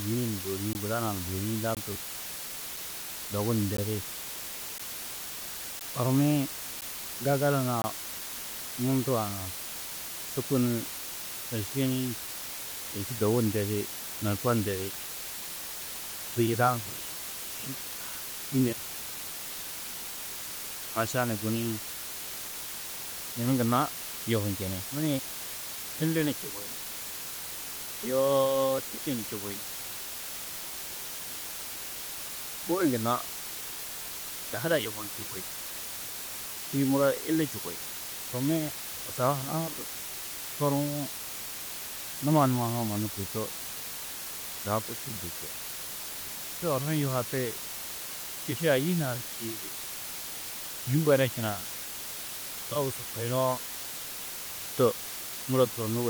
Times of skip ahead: none

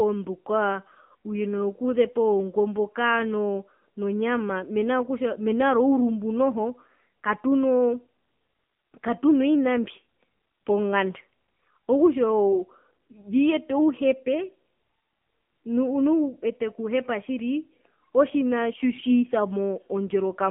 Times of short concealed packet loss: none

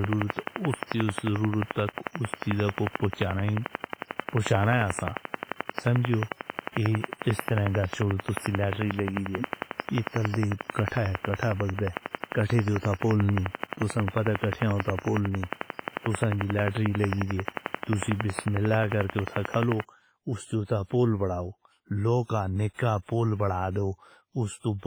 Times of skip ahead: none

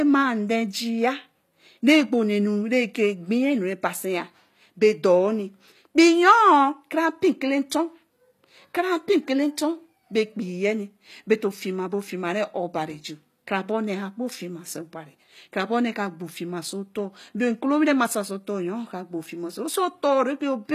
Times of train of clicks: none

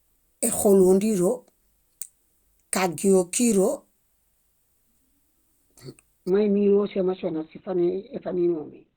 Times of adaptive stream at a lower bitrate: 6.30-8.96

